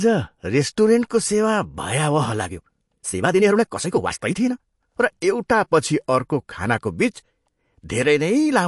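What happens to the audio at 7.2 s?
At 7.2 s the speech carries the same damage as the whole clip, likely MP3 compression at a low bitrate near 48 kbps. Short of bits, the encoder drops weak frequency lines and cuts everything above 11.3 kHz. The result is plainly audible watery, swirly artefacts.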